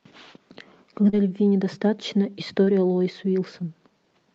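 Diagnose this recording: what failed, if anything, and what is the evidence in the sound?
Short concealed packet loss, network stage, at 1.09 s and 2.65 s: the decoder extended earlier sound over 40 ms and 20 ms gaps, showing smeared spectrogram frames.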